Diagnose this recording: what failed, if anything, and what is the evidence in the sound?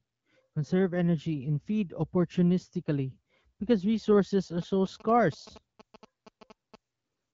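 The failure is in the analogue wiring: GSM signalling bursts get in from about 4.62 s to 6.76 s. You hear that galloping dit-dit-dit of short buzzes at roughly 217 Hz, sitting around 20 dB under the speech. A nearby 2G phone was sending short groups of radio bursts while signalling, and some junction in the audio path rectified that RF into its pulse envelope. The speech underneath stays clear, which fits the HD Voice codec running at a decent rate.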